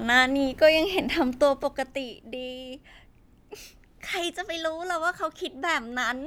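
An unsmoothed gain drop of about 10 dB, taken in about 2 dB steps roughly seven a second, causes zipper noise, ticking from 1.2 to 2.08 s.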